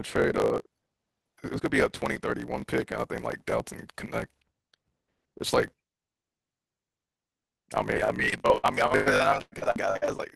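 Throughout the speech, a steady 50 Hz buzz sits under the voice, which runs 1.16 times fast at normal pitch: a block size mismatch, truncating each written block, consistent with 1024-sample blocks. From 7.92 to 10.20 s the voice turns choppy and robotic, with holes up to 121 ms: repeated packet loss, with roughly a third of that stretch patched by continuing earlier sound.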